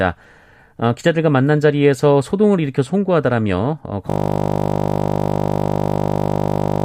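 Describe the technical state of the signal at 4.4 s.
At 4.4 s the system has frozen mid-hang. The computer or driver stalled while the sound hardware kept replaying one 20 ms piece of speech from 4.1 to 6.84 s, a system hang loop. It sounds like a steady 50 Hz buzz, and roughly three seconds of audio are lost.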